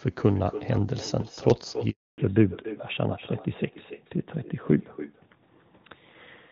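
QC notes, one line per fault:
Throughout: echo with no canceller. Every phrase is trailed by a fainter, thinner copy roughly a third of a second later, about 15 dB below the speech. The far end's loudspeaker is feeding its microphone, and nothing strips that return before it crosses the network back.
1.90 to 2.18 s: handover gap. The speech fades out within a few tens of milliseconds and is then silent for 280 ms. The call was moving between networks, and no speech frames arrived until the new link took over, so that stretch of speech is gone.
2.18 s to the end: fallback to narrowband. From the moment the gap closes, the speech loses all content above 4 kHz and turns duller and rougher than before the break, where the AMR-WB link at 23.85 kbit/s carried it. After the handover the call came back on AMR-NB at 12.2 kbit/s.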